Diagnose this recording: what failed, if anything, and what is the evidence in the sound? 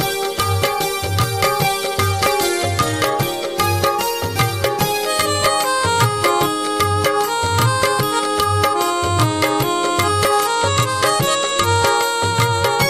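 Bluetooth SBC bit pool drop at the codec stage, from 2.08 to 3.01 s and again from 10.32 to 11.97 s. The treble dulls and gritty noise rises, which fits the bit pool falling from about 28 to 13, near 102 kbps. The gritty noise separates it from plain filtering, and continuous sound separates it from packet-loss dropouts.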